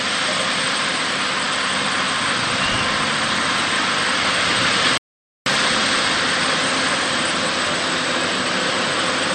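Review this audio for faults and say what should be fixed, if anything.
A rebuffering stall occurs from 4.98 s to 5.46 s: playback exhausted its downloaded audio and froze, inserting about 0.49 s of silence before resuming at exactly the point where it stopped, so nothing is lost but the timeline stretches. On a waveform it shows as a flat, silent gap; on a spectrogram, a blank vertical band across all frequencies with abrupt edges. A larger playback buffer or adaptive bitrate switching would prevent it.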